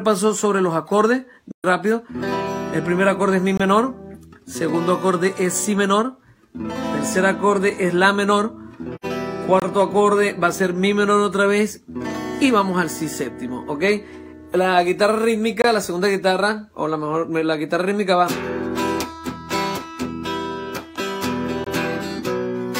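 At 1.51 s the sound fades out and back in, leaving a hole until 1.65 s. This is AAC frame loss with muting. About 128 ms of data went missing, which fits three lost frames. The decoder zeroed their spectrum. Its overlapping windows then eased the level down and up again, so the hole has soft edges.

At 3.57 s a brief silence appears. This is a gap between chunks. It lasts about 23 ms. The audio was delivered in 6-second chunks, and silence sits at each join. Nothing is lost, but the flow is interrupted.

From 8.95 to 9.05 s there is a second soft-edged dropout from AAC frame loss with muting. This one is about 85 ms long, which points to two lost frames.

The chunk gaps return at 9.60, 15.62 and 21.64 s. Each is again about 23 ms. They fall about 6 seconds apart, a steady rhythm of short holes.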